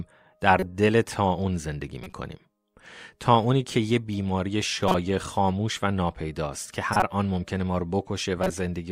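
Short chirps and noise bursts break into the speech at 0.60–0.63, 2.03–2.13, 4.88–4.95, 6.93–7.03 and 8.37–8.50 s, most peaking near −10 dBFS, the second quieter at about −25 dBFS. Each is a corrupt frame decoded: damaged bits were played anyway, putting energy at wrong frequencies for roughly one to four frames.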